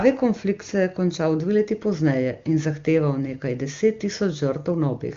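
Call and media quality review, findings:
No audible faults found.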